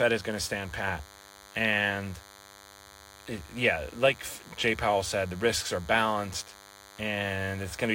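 From start to finish there's a DECT cordless phone buzz under the speech: a thin, steady 100 Hz drone with lots of harmonics, sitting roughly 25 dB down. A nearby DECT handset or base is bursting every 10 ms, and the audio circuitry rectifies that radio energy into sound.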